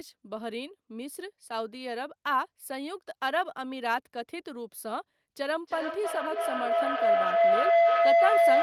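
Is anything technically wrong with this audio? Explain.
Yes. Feedback howl begins at 5.52 s and runs to the end. Sound from a loudspeaker re-enters a microphone and gains level on each trip. The repeats narrow to a tone around 700 Hz, coming back roughly every 0.3 s. It peaks about 9 dB above the speech.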